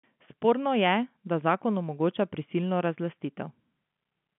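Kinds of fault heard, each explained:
Nothing faulty can be heard in this speech.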